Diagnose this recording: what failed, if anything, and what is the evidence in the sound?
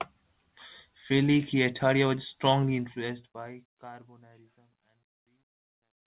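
Nothing failed; no faults found.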